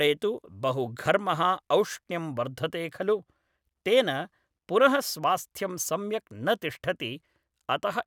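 Nothing in the recording stood out as a technical fault on listening.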